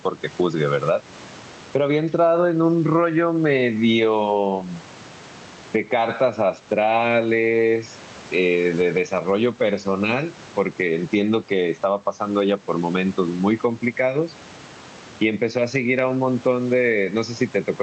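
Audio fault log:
Throughout: gain pumping, with the level swinging by about 10 dB under loud speech, likely from excessive mic gain driving a fast limiter.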